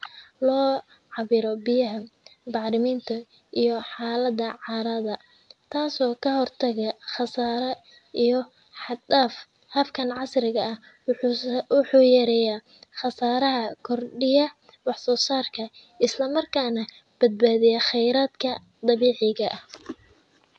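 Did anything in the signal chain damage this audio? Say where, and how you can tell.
No, nothing in the signal chain damaged this audio.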